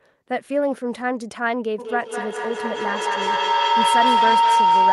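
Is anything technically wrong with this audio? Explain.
Yes. From 1.78 s to the end, the speech is overtaken by feedback howl: sound from a loudspeaker re-enters a microphone on the same call and returns louder on each pass. The loop narrows to a tone around 1 kHz that pulses roughly every fifth of a second and peaks about 6 dB above the speech. A spectrogram shows a bright horizontal line near 1 kHz, and the waveform shows a swelling, throbbing envelope.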